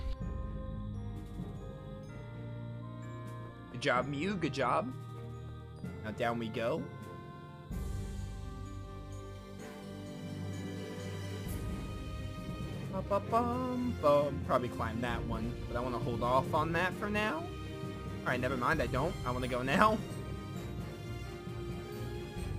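From about 5.95 s to the end, the audio picks up a gritty, inharmonic fizz riding on the louder and brighter moments, about 30 dB under the signal. That's crude rate conversion, done by repeating samples with no filtering, and the pattern points to a 44.1 kHz to 48 kHz change.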